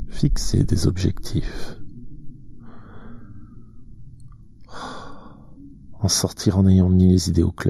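Throughout the clip, channel delay (comb filtering) gives the sound a hollow, phasey colour. One channel arrives a fraction of a millisecond late, so summing to mono cancels shared content at evenly spaced notches, the first near 3 kHz. Unlike a phaser, these notches never move.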